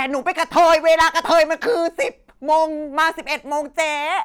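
From 0.28 to 1.43 s the speech is hard clipping, driven about 8 dB past the level the stage can pass, so every peak is sheared flat and a harsh fuzz rides all the louder syllables. Two shorter bursts follow, 2.51 to 2.63 s at about 2 dB over and 2.99 to 3.07 s at about 4 dB over, heard as brief crackle. Unlike soft saturation, the flat tops throw off harmonics high into the treble, giving a gritty edge rather than warm thickening.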